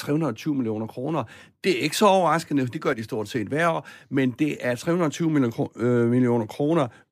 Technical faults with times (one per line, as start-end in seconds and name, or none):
2.93-2.98 one channel drops out